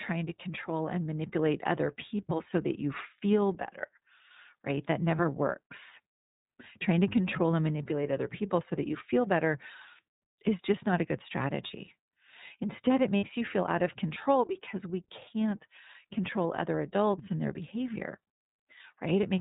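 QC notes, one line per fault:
throughout, iLBC codec: the speech is band-limited to nothing above 4 kHz and has a plainly audible rough, slightly synthetic edge. That fits iLBC at 13.33 kbps with 30 ms frames, where each frame's excitation is coded on its own, so some roughness comes through in every frame.
5.16, 11.67 (right after "just not a good"), 13.17 to 13.24 (just before "you feel out of"), lost iLBC frames: short held, slightly buzzy vowel-like patches, 30 ms at the first two and 60 ms at the third. The decoder covers missing packets by repeating the last pitch cycle mixed with noise. Each frame stands alone, so the speech recovers almost immediately.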